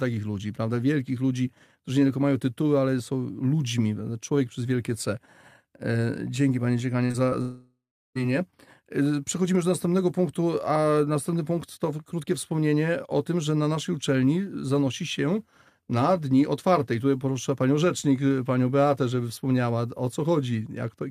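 At 7.05 to 7.11 s and again from 7.11 to 7.16 s, the speech briefly smears and wobbles, and a third, shorter blur follows at 7.30 to 7.33 s. This is short concealed packet loss: roughly 40 ms, then 20 ms, then 20 ms of audio arrived too late to decode. Each time, the receiver bridged the hole by extending the preceding sound before easing back into the real signal.

From 7.41 to 8.17 s the speech gives way to a fading buzz or hiss continuing the last sound, which then settles into silence for its final 0.35 s or so. When the speech resumes, that stretch of about 0.74 s is simply missing. A long network dropout is the likely cause. Nothing arrived for that span, and the receiver's concealment stretched the last sound until it decayed away.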